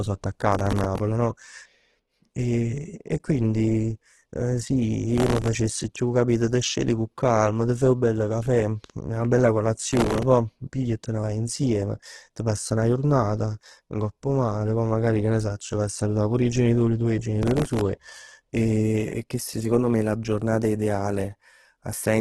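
Opus compression runs through the whole of this speech recording and is the likely cause of its coarse, grainy texture: there is nothing above about 12.1 kHz, and voiced sounds come out rough and noisy, heavily damaged, as the music-mode encoder fills starved bands with folded or noise-like energy, which points to a bitrate as low as 12 kbps. Processor overload crackle bursts in at 0.52–1.00 s, 5.16–5.48 s, 9.91–10.23 s and 17.43–17.81 s, where a gritty tearing rides over the speech. In each burst the processor fell behind for a stretch, missing some 20 to 50 buffer deadlines in a row, and each missed slot replayed a sliver of old audio with hard edges. The density of the clicks fits very short buffers of only a millisecond or two, and the crackle stops once the load clears.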